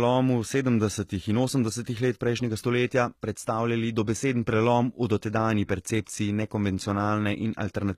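Throughout, likely HE-AAC compression at a bitrate that fits about 20 kbps rebuilds the speech's treble from lower bands, plainly audible as artificial top end, with nothing above 14.9 kHz.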